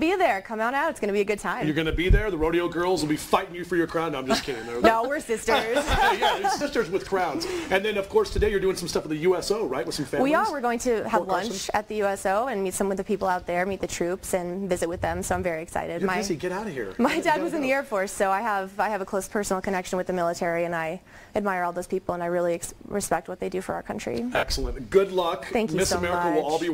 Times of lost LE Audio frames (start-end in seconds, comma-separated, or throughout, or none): 6.59-6.61, 24.33-24.43